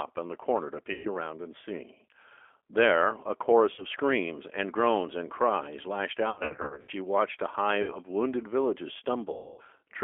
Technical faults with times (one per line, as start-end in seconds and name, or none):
0.00-10.03 G.729 codec
0.93-1.09 VoIP packet loss concealed by the speech codec
3.74-3.85 VoIP packet loss concealed by the speech codec
6.30-6.91 VoIP packet loss concealed by the speech codec
7.82-7.99 VoIP packet loss concealed by the speech codec
9.33-9.62 VoIP packet loss concealed by the speech codec